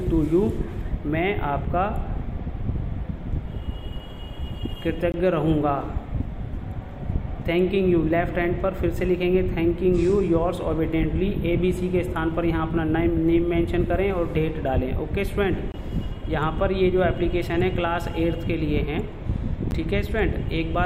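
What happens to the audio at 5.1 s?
At 5.12 s the sound drops into a block of digital silence lasting 20 ms, until 5.14 s. A run of samples was replaced by zeros. It cuts out and back in with no fade, so it is heard as a short hole.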